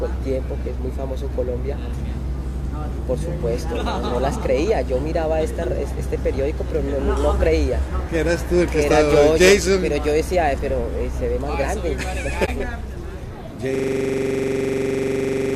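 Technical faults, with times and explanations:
12.45–12.49 s, corrupt frame concealed: a damaged AAC stretch was patched by the decoder.
13.75 s to the end, system hang loop: the system froze while the hardware replayed one 42.67 ms buffer, fitting 2048 samples. It gives a 23.4 Hz rattle, repeating about forty times.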